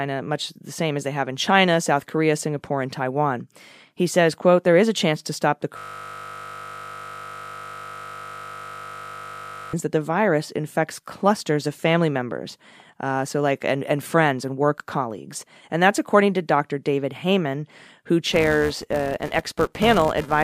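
At 5.78 s a system hang loop sets in: the computer or its audio driver stalled, and the playback hardware kept cycling through the same small stretch of its ring buffer instead of receiving fresh samples. That 20 ms fragment of speech repeats exactly, about 200 times, until 9.73 s. Because the loop is so short, it is heard as a steady, flat buzz at 50 Hz.

From 18.32 s to the end of the clip, a filter is restarted on every block. Its internal state is discarded between blocks, so each one begins from silence, and the reset leaves a tiny transient at every block boundary. These arrive at 375 Hz, which fits a 128-sample block, and merge into a buzzy tone that rides on the speech, louder where the speech is louder and fading as it softens.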